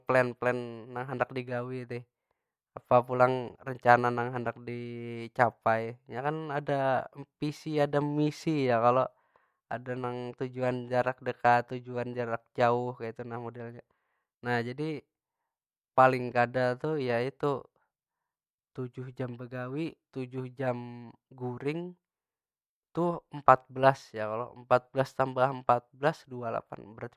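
No technical faults can be heard anywhere in this recording.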